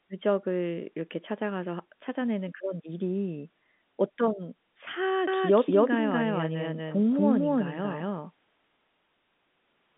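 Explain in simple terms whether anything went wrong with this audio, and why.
Yes, something went wrong. From 5.27 seconds to the end, the speech plays twice. A second copy follows about a fifth of a second behind the first. It is roughly as loud as the original. This is a doubled audio track. The likely cause is the same sound being picked up again by a slower route. The copy starts abruptly and has no echo tail. The narrow telephone sound is normal for a phone line.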